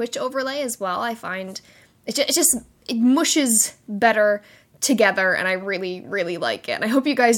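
No technical fault can be heard anywhere in this speech recording, and the signal stays intact and continuous over its whole duration.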